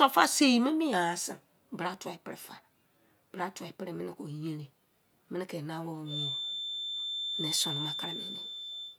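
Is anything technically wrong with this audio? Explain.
Yes. From about 6.04 s to the end of the clip, a feedback whistle sits behind the speech: a thin, steady tone at 3.6 kHz, only a few decibels below the speech level, swelling and fading slowly in loudness. The cause is likely a loudspeaker-to-microphone loop running just at the edge of feedback, where the loop gain at that one frequency is high enough to keep ringing without building into a full howl.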